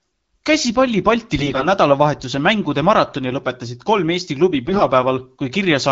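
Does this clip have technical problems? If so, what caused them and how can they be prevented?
Yes. AMR bit errors at 1.39–1.66 s and 4.65–4.84 s turn the speech hoarse and gargly, as flipped unprotected bits at roughly 10–15% misplace excitation pulses and skew gain and spectrum values. A stronger radio link or more robust channel coding would prevent this.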